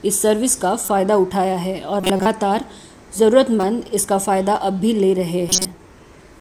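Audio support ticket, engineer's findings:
Corrupt frame decoded, four events. Short chirps and noise bursts at 0.85–0.90 s, 2.01–2.26 s, 3.60–3.63 s and 5.49–5.65 s. Loudest at 2.0 s and 5.5 s, peaking near about -5 dBFS. Quieter at 0.85 s (about -10 dBFS) and 3.6 s (about -15 dBFS). Probable component: decoder input. Bit errors in compressed frames were played, not concealed. Misread gains and codes push energy into wrong bands. Each burst spans a few frames. The 2.0 s event covers several.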